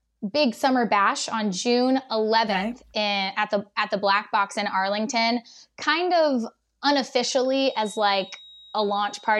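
At 7.4 s a feedback whistle appears and runs to the end of the clip at 9.4 s. It is a thin, steady tone near 3.8 kHz, sitting well below the speech, roughly 25 dB down. Its level swells and fades slowly. The likely cause is a loudspeaker-to-microphone loop hovering right at the edge of feedback. That lets this one frequency ring on indefinitely without building into a full howl.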